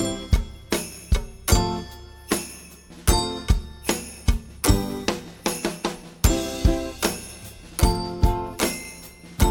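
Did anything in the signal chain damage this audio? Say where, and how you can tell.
No, nothing audible in this recording points to damage at any stage of the signal chain, with no dropouts, distortion or other disturbances in the signal.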